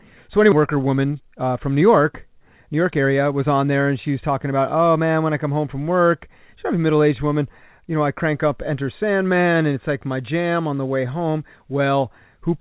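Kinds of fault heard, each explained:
Skip ahead: at 0.52 s playback jumps forward, losing roughly a second of speech with no gap or fill, unlike a dropout, which leaves silence.
Jitter buffer speed-up: from 0.68 to 3.22 s the receiver trims pitch periods to drain excess delay, so speech runs at 112% speed with pitch unchanged, unlike a resampling error.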